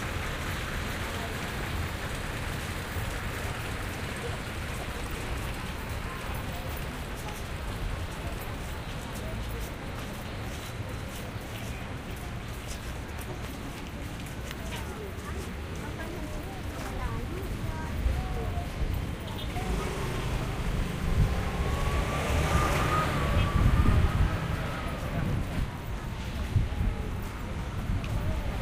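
At 4.09 s, chunks out of order. Two blocks of about 0.37 s swap places, so one block plays after the block that should follow it. Nothing drops out. The sound jumps back and forth with hard joins between blocks, through to 4.83 s. At 7.06 s it happens again, worse. One chunk arrives three chunks late. The jumbled stretch lasts until 8.55 s, with three hard joins.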